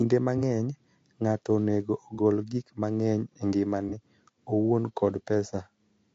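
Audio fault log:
Throughout: low-delay AAC compression. The speech sounds rough and grainy, with a hiss sitting between the harmonics. The top band sounds thinned and synthetic. The likely cause is AAC-ELD, the low-delay codec used in video calls, at a rate that fits about 32 kbps. Its very short frames cannot separate pitch harmonics cleanly. Bits run short at this rate, so the damage is plainly audible.
0.38 to 0.42 s, 2.15 to 2.19 s, 3.89 to 3.94 s: AAC frame loss with concealment. Each event is a brief smeared, noisy patch lasting about 30 ms, which fits a single lost frame. The decoder had no data for that span. It rebuilt the gap from the last good spectrum, with scrambled phase or interpolated energy. The result blurs the speech for a moment, then normal decoding resumes.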